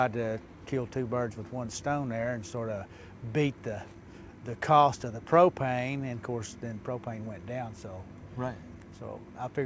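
Nothing stood out on listening, and the top end stops at about 8 kHz, which fits a wideband call codec such as G.722.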